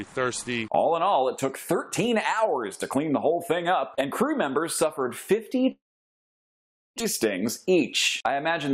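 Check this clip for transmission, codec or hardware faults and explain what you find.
Two transmission faults are audible: a long gap followed shortly by a hurried stretch.

From 5.71 to 7.02 s the sound gives way to a brief fading continuation and then about 1.2 s of silence before resuming, with about a second of material skipped. This is likely a long network dropout: the receiver padded the missing packets, then went quiet until audio resumed further along.

From 7.37 to 7.81 s the audio runs at about 112% speed with unchanged pitch, sounding rushed. This is a jitter buffer speed-up: the receiver trimmed short pitch-period pieces repeatedly, roughly 70 ms in total, to work off excess buffered delay after the dropout.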